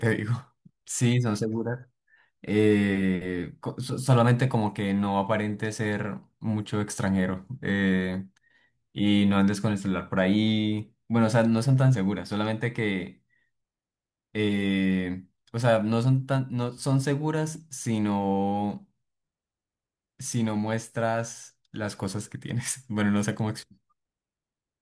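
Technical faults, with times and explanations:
No technical faults can be heard in this speech recording; the signal stays steady and intact from its opening moment to its final one.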